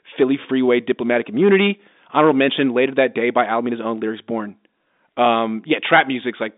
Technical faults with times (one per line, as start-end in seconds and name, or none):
none